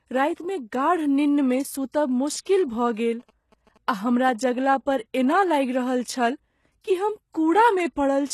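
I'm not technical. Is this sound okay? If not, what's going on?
No. Throughout, the speech is heavily damaged by compression: s sounds come out gritty and metallic, and the top end stops at about 12.3 kHz. The likely cause is HE-AAC compression, which fakes the treble by copying lower sounds upward. Unlike simple muffling, the treble is there but sounds wrong.

From 2.11 to 3.78 s there are GSM signalling bursts: a quiet, galloping dit-dit-dit of short buzzes, pitched around 217 Hz, from a nearby 2G phone's radio. Unlike steady mains hum, it arrives in clusters, then stops.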